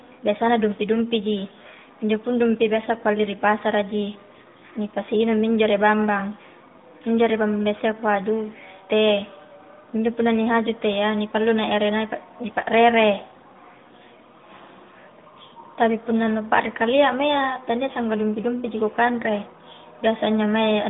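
There are no technical faults in this speech clip to describe in time order.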